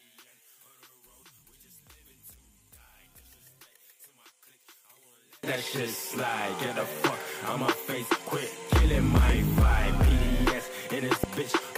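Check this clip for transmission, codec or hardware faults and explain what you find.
Two kinds of fault show up here: a mono-cancellation problem early on, then some loud pops near the end.

From 0.0 to 5.43 s, one channel is likely inverted. Shared content cancels when summed, so the level drops by about 32 dB, leaving only a faint remainder.

At 9.17 to 9.32 s there's a loud pop, heard as two quick pops, and another single one at 11.24 to 11.26 s. Each is likely a voltage spike, jumping well above the sound, which carries on underneath.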